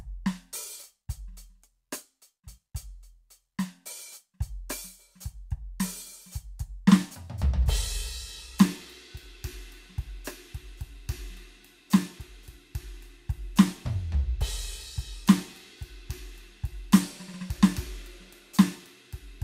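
No technical faults are audible.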